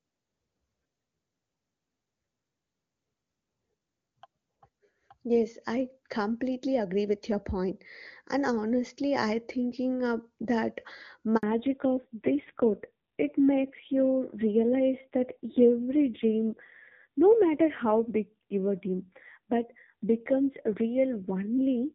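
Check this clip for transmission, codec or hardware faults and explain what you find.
Two faults, both around 11.4 s, where the call seems to switch networks.

Handover gap, 11.37 to 11.43 s: as the link changed, no speech frames came through, so the voice cuts out for 60 ms and that bit is simply lost.

Fallback to narrowband, from 11.43 s to the end: the call dropped from HD Voice to an old narrowband codec. Nothing above 4 kHz survives, so the speech sounds duller and rougher. The roughness suggests a low-rate AMR-NB mode, around 5.9 kbit/s, instead of the clean wideband AMR-WB heard before the switch.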